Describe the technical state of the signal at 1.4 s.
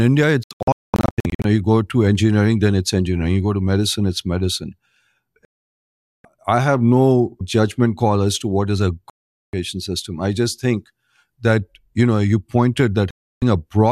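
Digital broadcast dropout, 0.43 to 1.45 s: the receiver muted failed frames, leaving short silent holes totalling 0.7 s, the longest 0.22 s, before "you go to engineering".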